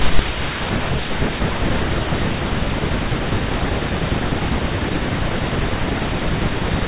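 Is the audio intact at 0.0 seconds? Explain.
Yes, at 0.0 seconds the speech audio is intact, with no dropout, glitch or other fault at that moment.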